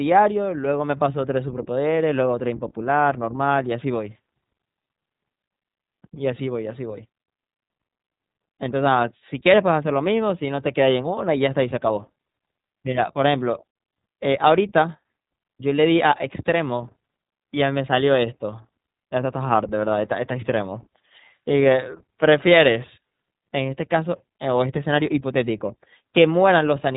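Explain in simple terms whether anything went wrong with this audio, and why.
Yes, two related things went wrong. The whole recording has passed through the iLBC codec, a phone-grade voice codec built for internet calls. It keeps nothing above 4 kHz, so the speech sounds boxed-in and lacks crispness, and the squeezing is plainly audible as a slightly rough, synthetic edge on the voice. That happens because iLBC rebuilds each short chunk of speech from a simplified model rather than keeping the real waveform.

There's also a brief spot of lost iLBC frames at 21.52 to 21.54 s. A tiny piece of the stream went missing, about 20 ms, which fits exactly one iLBC frame. The decoder covered the hole by repeating the last bit of voice with some noise mixed in, so you hear a very short held, faintly buzzy sound there. Because each iLBC chunk stands on its own, the speech snaps back to normal almost immediately afterwards.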